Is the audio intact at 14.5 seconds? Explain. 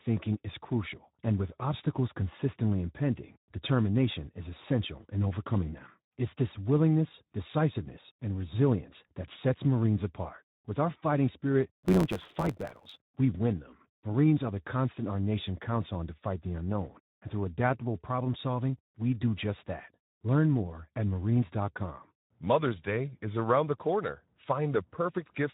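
No. At 14.5 s the speech sounds noisy and hoarse, with plainly audible Speex codec damage and only a shaped, noise-like fill above 8 kHz. This runs through the whole clip. The coarse excitation fits a low setting around 11 kbps, which leaves this CELP codec too few bits.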